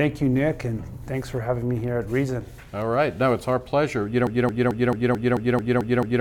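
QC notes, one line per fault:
4.27–6.20 s, broken-record loop: the player, encoder or stream likely stalled and kept resending its last buffered fragment, so a 220 ms slice repeats nine times back to back until the clip ends. The audio that should have followed is lost.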